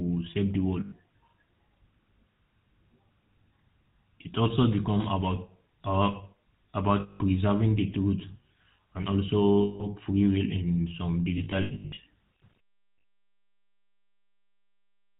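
Throughout the recording the speech passes through the GSM full-rate codec, which fits the 13 kbps first-generation GSM coder. It rebuilds the vocal tract from a coarse model driven by a sparse, regularly spaced pulse excitation and discards everything above 4 kHz. The result is a plainly audible buzzy, gravelly roughness over the whole clip, with a dull, band-limited top end.

Lost GSM frames occur five times, and each time the decoder fills the gap by repeating the last good frame. At 0.8 s, just after "save the", about 0.12 s is held as a rough, metallic ring. From 7.0 to 7.21 s, just before "preserving the truth", the ring lasts about 0.2 s. At 9.62 to 9.87 s the same smeared, tinny hold lasts about 0.18 s. From 11.38 to 11.99 s, after "free will in some", the losses are scattered over about 0.6 s, with no single dropout much longer than a tenth of a second. At 12.96 s a brief 80 ms ring follows.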